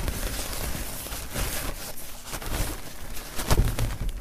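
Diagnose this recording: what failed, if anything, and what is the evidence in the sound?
The codec stage failed briefly. At 1.90 s the sound jumps ahead by about one compressed frame, roughly 30 ms, with frames near 26 ms long. Compressed frames were skipped, either missing or rejected as damaged.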